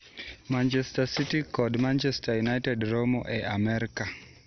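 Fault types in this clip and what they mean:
MP2 compression: the speech sounds dull and muffled with a gurgling, granular roughness throughout, and nothing comes through above about 6.1 kHz. This is likely MPEG Layer II coding at a low bitrate, around 48 kbps, switching off upper sub-bands and coarsely quantising the rest.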